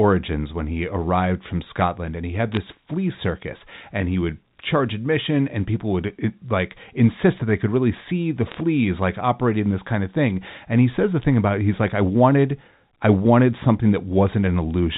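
Bit errors on a digital phone line appear from 2.52 to 2.57 s, between "and he had" and "flea circus and he", and again from 8.51 to 8.56 s, after "could really see the" and before "like operating this kind". Flipped bits corrupt single A-law samples. Where a sign or high bit is hit, that sample leaps and snaps, so each burst sounds like brief crackle over the speech. The first burst is denser than the second.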